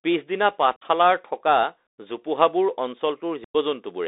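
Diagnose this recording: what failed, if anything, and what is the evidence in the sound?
The codec stage is the culprit for the overall sound: it's a Bluetooth CVSD headset codec, and the damage is plainly audible. The speech is squeezed into a narrow band of roughly 300 Hz to 3.7 kHz, consistent with a 64 kbps CVSD link. CVSD encodes each sample as a single up-or-down step whose size adapts, so sharp high-energy sounds outrun it and come out grainy, with a coarse hiss running underneath the whole clip.

The second fault is unconcealed Bluetooth headset packet loss on the radio link between headset and phone. There are two clean dropouts, from 0.76 to 0.83 s and from 3.44 to 3.56 s, losing about 52 ms and 101 ms of speech. That suggests something like fifteen and thirty lost packets. Nothing filled the gaps, so the speech simply drops out and comes back with hard edges.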